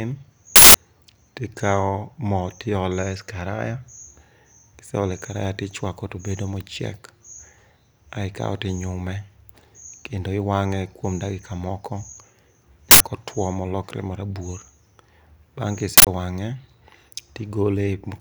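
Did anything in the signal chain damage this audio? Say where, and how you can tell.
Yes: harsh, loud digital-noise bursts at 0.56–0.74, 12.91–13.00 and 15.98–16.07 s. A driver-level uninitialised buffer played leftover memory, with lengths fitting 8192- and 4096-sample blocks.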